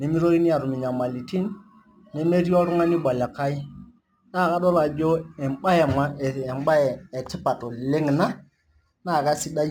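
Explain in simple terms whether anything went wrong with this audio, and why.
Something did go wrong. The whole clip carries a crude rate conversion fault: the speech was moved to a new sample rate by simply repeating the nearest sample instead of smoothing properly. That leaves a faint, gritty fizz riding on the voice, strongest on loud and sharp sounds, with a pattern that fits a jump from 44.1 kHz to 48 kHz. Unlike steady background hiss, this grit comes and goes with the speech and never sits in the silences.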